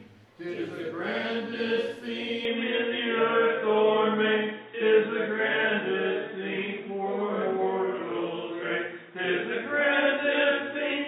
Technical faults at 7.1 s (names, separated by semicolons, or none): input switched to a poorer device